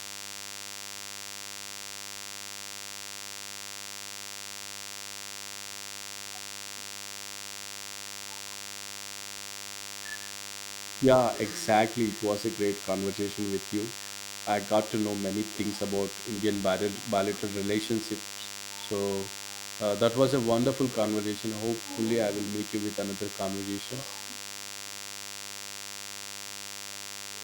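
A steady, thin, buzzy hum runs under this speech recording from start to finish, sitting roughly 10 dB below the voice: DECT cordless phone buzz, from a nearby handset or base station's 100 Hz radio bursts being rectified by the audio circuitry.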